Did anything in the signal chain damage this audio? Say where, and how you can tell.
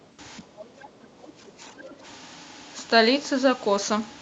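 Yes. The call processing stage caused it, specifically the echo cancellation on the talker's end.

Other side's voice leaking through: from 0.0 to 0.17 s and again from 1.79 to 1.94 s, a faint second voice sits under the speech, about 35 dB down in the first stretch and about 30 dB down in the second. The likely cause is a loudspeaker at the talker's device feeding the far end back into the microphone, with the echo canceller leaving a residue it failed to subtract.

Speech suppressed in double talk: between 0.4 and 2.03 s the talker's level sags, by roughly 10 dB at the deepest, for about a second in total. The leak at 1.79 s falls inside this span, showing both sides were active together. The likely cause is the canceller, unable to tell its own talker from the returning echo, pulling down everything during the overlap. The Opus call path, band-limited to 8 kHz, is not the source.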